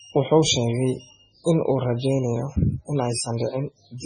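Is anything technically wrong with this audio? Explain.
Yes. Throughout the speech, the sound carries the marks of heavy MP3 compression, likely from encoding at a very low bitrate, which fits roughly 16 kbps. Starved of bits, the encoder cut everything above 9.9 kHz and kept dropping weak frequency lines that flicker in and out from one frame to the next. The result is a dull top end with a watery, swirling texture, metallic chirps on s sounds, and smeared consonant attacks.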